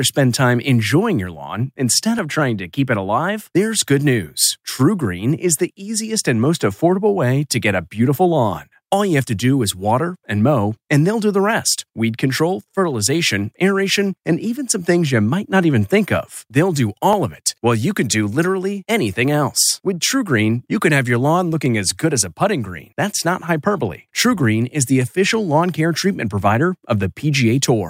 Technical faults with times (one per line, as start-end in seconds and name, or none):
2.19 dropped samples
17.13 dropped samples
21.66 dropped samples
25.02 dropped samples